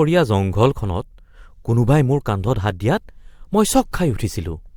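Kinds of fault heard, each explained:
pre-echo: a burst of hiss about 13 dB up fills roughly 17 ms just before a sharp speech attack near 3.92 s, smearing its onset. Unlike a click or reverb, the noise comes before the attack, fitting a 26 ms transform block without short-block switching.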